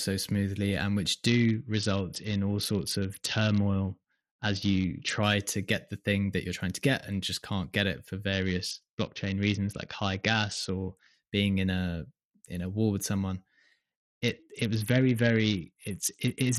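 A speech recording over a congested Bluetooth link suffers a Bluetooth SBC bit pool drop from 1.27 to 5.23 s, 8.33 to 11.14 s and 13.81 s to the end. Starved of bits, the encoder dulls the treble and adds gritty noise, consistent with a bit pool cut from 28 to about 7, near 66 kbps.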